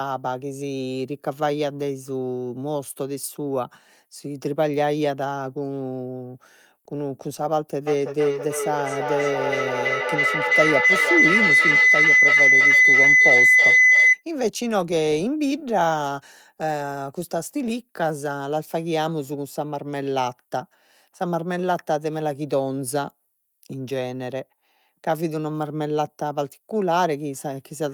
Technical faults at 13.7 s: feedback howl

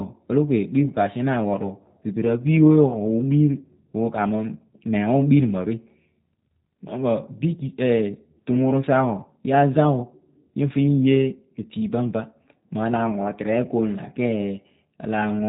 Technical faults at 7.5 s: G.729 codec

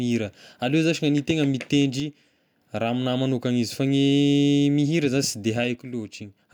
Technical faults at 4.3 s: none

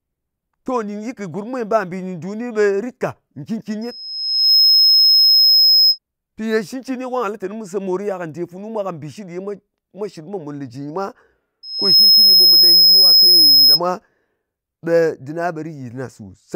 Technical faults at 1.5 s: none

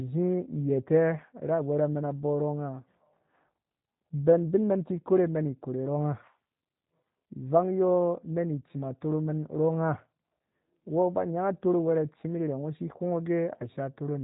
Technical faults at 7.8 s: G.729 codec

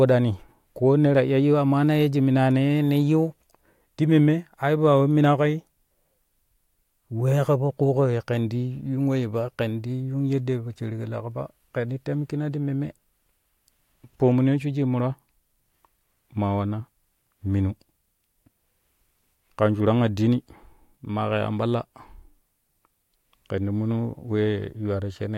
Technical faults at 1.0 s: none

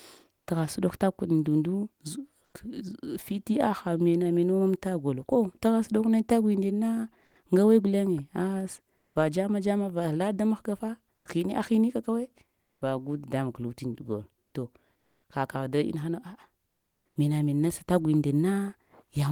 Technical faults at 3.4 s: none

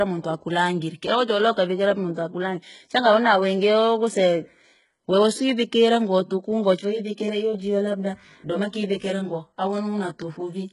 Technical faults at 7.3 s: HE-AAC compression; channel delay (comb filtering)

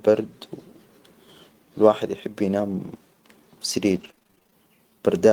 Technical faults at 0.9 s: none

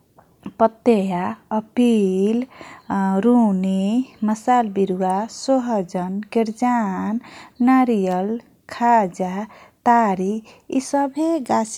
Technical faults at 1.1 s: none

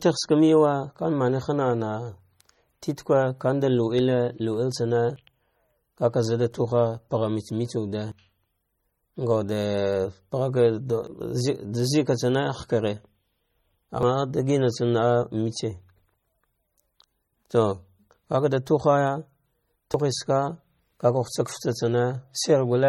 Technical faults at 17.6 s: MP3 compression

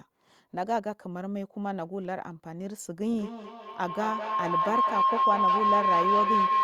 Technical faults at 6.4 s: feedback howl

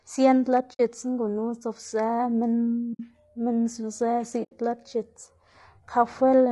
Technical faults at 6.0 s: low-delay AAC compression

